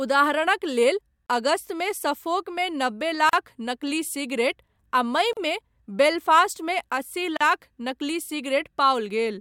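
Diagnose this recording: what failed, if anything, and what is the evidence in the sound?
The speech drops out four times, every 2.0 s: a silence of 30 ms at 1.26–1.29 s, just after "उदाहरणक लेल", then about 38 ms at 3.29–3.33 s, 5.33–5.37 s and 7.37–7.41 s, the last just after "बेलफ़ास्टमे अस्सी". Each time the speech resumes exactly where it stopped. This is a gap at a join of encoded pieces, a codec-stage fault: 2 s segments were encoded separately and concatenated untrimmed, so encoder start delay and final-frame padding sit as silence at each seam.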